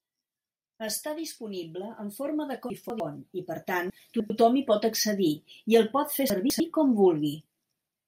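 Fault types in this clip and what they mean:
chunks out of order: Three brief jumbled moments, at 2.7 to 3.0 s just after "disponible en forma de", at 3.9 to 4.3 s after "i per tant", and at 6.3 to 6.6 s after "i el pot fer", where the speech seems reshuffled. A 100 ms block of audio plays two or three blocks later than it should. Nothing is lost, but the order is wrong, with abrupt splices at the joins.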